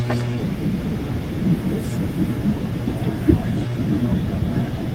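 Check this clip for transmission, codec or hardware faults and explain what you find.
No faults are present in this speech recording. There is nothing here for a listener to flag.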